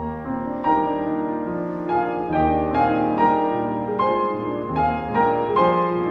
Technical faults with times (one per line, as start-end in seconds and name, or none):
none